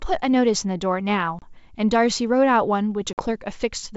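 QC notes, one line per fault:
1.39–1.44 s and 3.13–3.24 s: packet loss on an ADPCM call. Abrupt silent gaps of 30 and 50 ms. The decoder's predictor drifts, so sound resumes slightly distorted.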